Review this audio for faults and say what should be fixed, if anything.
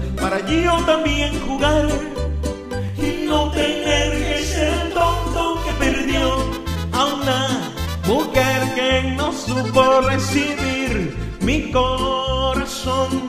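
From 2.89 to 5.71 s there is channel delay doubling. One channel lags by about 42.7 ms, which fits a 2048-sample buffer, and mono summing makes an audible slap. To prevent it, align both channels' buffers before any mono fold-down.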